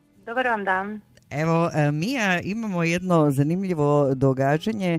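No technical faults are audible.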